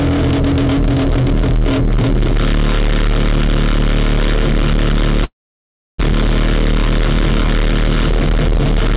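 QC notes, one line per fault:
5.24–6.02 s, long network dropout: the sound stops and the last moment is smeared into a fading buzz before the gap goes quiet for most of its length, about 680 ms. When the audio returns, roughly 600 ms of material is simply missing. This is likely a stretch where no packets arrived: the receiver stretched what it last had, then gave up and played near-silence. It resumed later in the stream with the gap's content never recovered.
6.13–8.94 s, jitter buffer speed-up: after the dropout the sound runs about 4% fast, at an unchanged pitch, until nearly the end. The buffer was left holding extra audio, around a tenth of a second more than it targets. To shed that delay, the receiver kept cutting out short pitch-period-sized slices, about 100 ms in total. Everything sits within the 4 kHz band of the G.711 mu-law call path.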